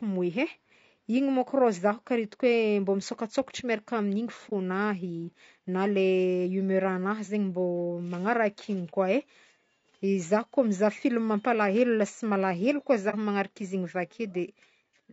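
The whole stretch of speech sounds rough and grainy, with a hiss between the harmonics and a thin, synthetic top end. That's likely low-delay AAC compression: AAC-ELD codes about 500 frequency lines a frame with a low-delay window, and the damage is plainly audible, consistent with something around 32 kbps.

Then there are three brief dips from AAC frame loss with muting, at 4.49–4.53 s, 8.90–8.95 s, and 13.10–13.15 s, the last between "lasa malahelo koa" and "manaraka izy". Each dip fits one lost frame of about 30 ms being zeroed, with the overlapping windows fading the sound out and back in.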